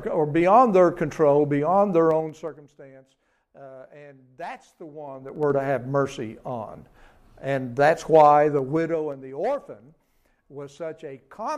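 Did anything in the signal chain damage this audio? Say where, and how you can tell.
Yes. Zipper noise comes from a software gain stage that moves the level in coarse 3 dB steps with no interpolation. It is audible as ticking over the level drop at 2.07–2.69 s (about 20 dB down, roughly ten steps a second), the rise at 5.04–5.53 s (about 20 dB up, faster, around fifteen a second) and the fall at 8.50–9.31 s (about 15 dB down, slower, around five a second). Each abrupt jump leaves a small click.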